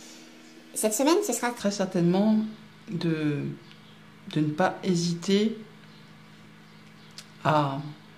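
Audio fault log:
0.0–1.6 s, section at the wrong speed: the opening stretch runs at 1.51 times its proper rate, so it sounds hurried and sits roughly seven semitones higher, close to a musical fifth. Reading samples out faster than they were captured shortens every event and raises every frequency together. At 1.6 s the audio drops back to its normal tempo and register. The likely cause is this section being played or resampled against the wrong clock.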